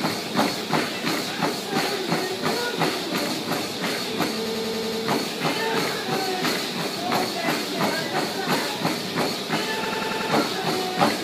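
At 4.46 s a system hang loop sets in and runs until 5.02 s, then recurs from 9.85 s to 10.31 s. Each time the machine stalls while playback keeps cycling one 92.9 ms slice, which fits a 4096-sample buffer, repeating six and then five times as a rapid stutter at about 10.8 Hz. A waveform shows identical repeating blocks, and a spectrogram shows vertical seams every 92.9 ms. Little or no sound goes missing afterward.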